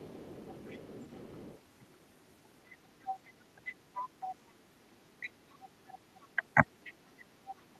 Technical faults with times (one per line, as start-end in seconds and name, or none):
0.00-1.59 other side's voice leaking through
3.02-4.36 other side's voice leaking through
5.20-5.26 speech suppressed in double talk
5.23-6.94 other side's voice leaking through
6.36-6.43 speech suppressed in double talk
7.47-7.55 other side's voice leaking through